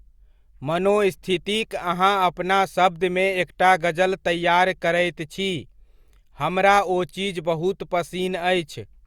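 Speech, with no technical faults.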